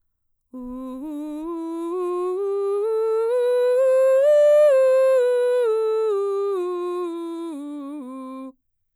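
No technical faults can be heard anywhere in this music.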